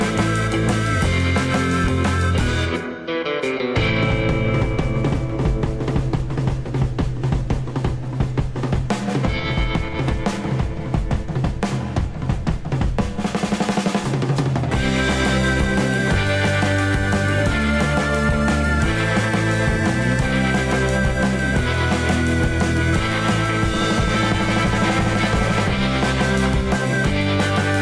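No technical faults can be heard anywhere in the recording, and the signal holds steady throughout.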